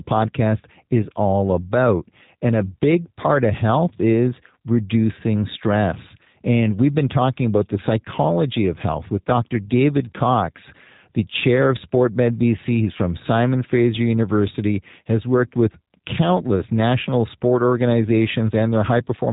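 Throughout, the speech carries G.729 codec damage consistent with 8 kbit/s, sounding rough and synthetic; a spectrogram shows everything above 3.8 kHz cut cleanly away.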